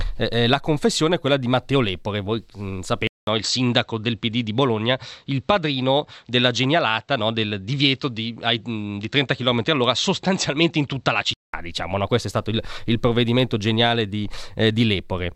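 At 3.07 s a 200 ms silence breaks the speech, just before "diciamo no questo è", and the sound turns duller, with nothing above 7.9 kHz and a faint new noise floor. Level stays much the same. The input likely switched to a poorer device. Fuller sound returns at 11.54 s.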